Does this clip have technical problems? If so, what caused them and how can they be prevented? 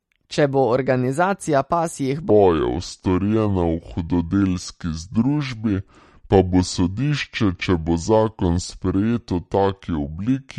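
Yes. MP3 compression runs through the whole speech clip: nothing is present above 14.6 kHz, and the plainly audible watery, swirly smearing on sibilants and attacks fits an MP3 encoding at about 48 kbps, where bits run short and weak frequency lines flicker on and off. Encoding at a higher bitrate, or keeping an uncompressed master, would prevent it.

A section at the wrong speed starts at 2.30 s, right after "bo organizacija pasjih", and lasts to the end. Playback there runs at 0.668 times normal speed, so the speech is slowed and pitched down by roughly seven semitones, likely because that part was played or resampled against the wrong clock. Checking that every segment is played at its recorded sample rate would prevent it.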